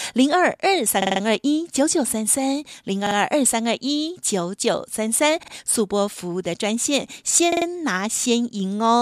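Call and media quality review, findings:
Repeated buffer, speech stutters at 1.02–1.21 s, 3.07–3.16 s, 5.43–5.53 s and 7.52–7.66 s. Same ~46 ms chunk replays two to four extra times, hard joins. Fits a 2048-sample playout buffer starving, device re-looping last block. Essentially nothing dropped.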